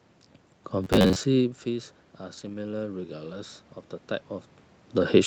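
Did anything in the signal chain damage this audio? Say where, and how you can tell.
Yes. From 0.84 to 1.29 s the sound turns into a rigid metallic buzz at 93.8 Hz, a period near 10.7 ms, with roughly half the material repeated. This is robotic sound from repeated short buffers, likely a driver or buffer underrun looping the last chunk. A fixed pitch separates it from codec warble.

From 2.37 to 2.55 s, a lost packet was rebuilt from error correction at the network stage. About 100 ms, fitting several separate 20 ms Opus packets, plays rougher and noisier but with no silence or gap, which distinguishes it from plain concealment or dropout.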